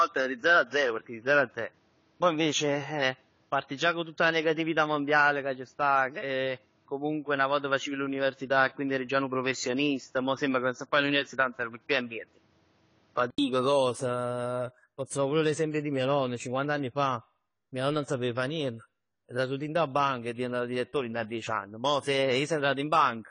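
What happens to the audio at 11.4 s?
At 11.4 s the audio has no content above 7.2 kHz and a noise floor roughly 40 dB below the signal, with level about unchanged. This lasts from the start until 13.38 s, where an 80 ms silence precedes fuller sound. The likely cause is an input switched to a poorer device, whose narrower band and own noise replace the normal input for that span.

Over this, AAC compression damage is plainly audible throughout. Nothing passes above 10 kHz, and the sound is smeared, with a warbling, fizzy texture on sibilants. This likely comes from AAC-LC coding at a low bitrate, consistent with about 24 kbps, where quantisation against the hearing model leaves spectral holes.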